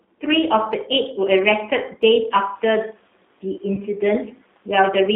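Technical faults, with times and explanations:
Throughout, G.729 codec: the audio sits in a narrow band from about 250 Hz up to 3.6 kHz and has a rough, slightly synthetic edge. That fits an 8 kbit/s G.729A stream rebuilding speech from a filter, pitch predictor and a few pulses per frame.
3.75–3.83 s, VoIP packet loss concealed by the speech codec: 30 ms went missing, and the decoder kept extending its last pitch and filter with falling gain. This gives a short stretched, fading sound, and the sound stays weakened until about 3.83 s, while the room noise that rises around two and a half seconds carries on underneath.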